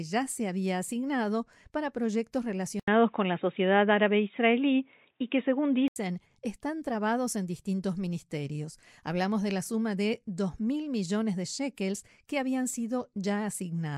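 Input switched to a poorer device, 2.80 to 5.96 s: after an 80 ms silence the speech turns dull and boxy, with nothing above 3.8 kHz, a level shift of about 5 dB and a faint new noise floor, likely from a microphone change.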